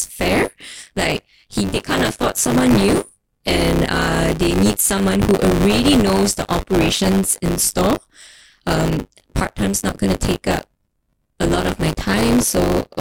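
Buffer tearing runs through the whole speech clip as a steady 100 Hz robotic buzz that rides on the speech and drops away in the pauses. The writing program and the playback hardware have slipped against each other, so in every buffer period about a fifth of the audio is stale, replayed from roughly 20 ms earlier, with hard joins at each side. Those joins recurring 100 times a second produce the rattling buzz.

Processor overload crackle appears in three bursts, from 1.71 to 3.04 s, from 5.51 to 7.18 s and from 11.67 to 12.49 s. In each burst the processor falls behind and misses a long run of very short buffers, each well under a millisecond. Every miss leaves a small silent gap with hard edges. The first burst points to a couple of hundred misses and the later two to around a hundred each. Together they form a gritty tearing crackle over the speech that stops when the load passes.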